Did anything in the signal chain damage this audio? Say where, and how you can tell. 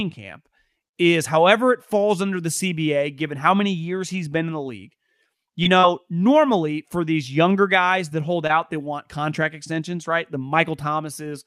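Yes. At the network stage, scattered short gaps appear between 5.63 and 8.51 s, just before "they want contract extensions". About four packets went missing, none longer than roughly 40 ms. The receiver concealed each by extending the preceding sound, leaving brief ticks and smeared hiccups.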